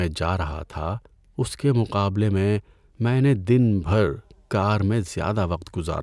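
No technical faults can be heard anywhere in the speech recording. There is no moment in the audio that marks a point where something went wrong.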